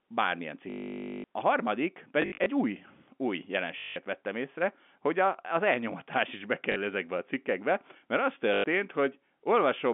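Packet loss with the last packet repeated occurs at 0.7 to 1.24 s, 2.22 to 2.46 s (scattered, before "új új"), 3.78 to 3.96 s (before "vettem észre hogy a"), 6.72 to 6.76 s (after "a az elnyomatás is"), and 8.54 to 8.64 s. Each time, the receiver replayed its last packet until fresh ones arrived. The gaps fit 20 ms packets, so the repeats produce a robotic buzz near 50 Hz. The stutter is longest at 0.7 s, about half a second. The speech runs over a G.711 telephone line band of about 200 Hz to 3.5 kHz.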